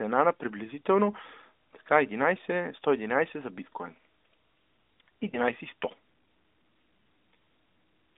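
At 5.30 to 5.37 seconds, lost AMR speech frames cause a brief dip or warble. The decoder fills what sounds like a single failed frame with fading, repeated settings.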